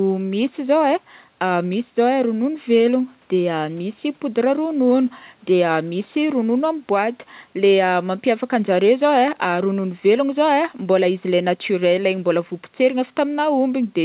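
Nothing here is technically wrong with this bit of speech; it has simply travelled over a call line, so it carries nothing above 4 kHz, just as you'd expect from G.711 mu-law at 64 kbps.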